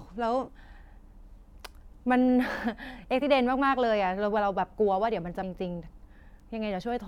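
Three short bursts of damaged data in a compressed stream land in this speech, at 0.47 s, at 3.21 s, and from 5.41 to 5.43 s. Each time, some of the compressed bytes are wrong, so the decoder can't read those frames properly, loses sync and hunts for the next valid frame header. What you hear is a tiny chirp or squawk cutting into the speech, gone in about 20 ms or less.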